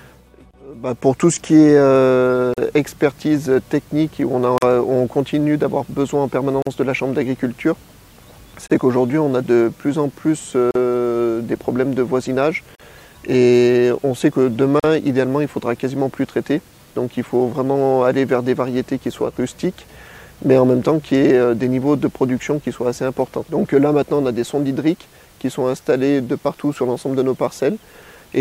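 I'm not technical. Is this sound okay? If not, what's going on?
No. There is a gap at a join of encoded pieces: the audio was saved in separate chunks and joined with each chunk's built-in silence left in. You hear brief holes of 28 ms at 0.51 s, then 43 ms at 2.54, 4.58, 6.62, 8.67, 10.71, 12.75 and 14.80 s, regularly every two seconds. Unlike a dropout, nothing is lost; the sound resumes exactly where it stopped.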